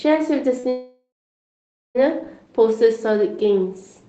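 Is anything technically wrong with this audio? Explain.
Yes. Two faults affect this speech recording, both early in the clip.

From 0.59 to 0.65 s there is short concealed packet loss. About 40 ms of audio failed to reach the decoder in time, and the receiver bridged the gap by extending the preceding sound, repeating its pitch if voiced or generating shaped noise if not, before crossfading back into real audio. The result is a brief smeared wobble, and any short consonant falling in that window can be lost.

From 0.69 to 1.97 s there is a gap that is likely a long network dropout, with roughly 1.26 s of audio never arriving. The receiver first continued the last sound as a fading buzz or hiss, but that extrapolation cannot be sustained, so for about 870 ms of the gap only silence or a faint steady noise remains. The speech then resumes further along, and the missing content is not recovered.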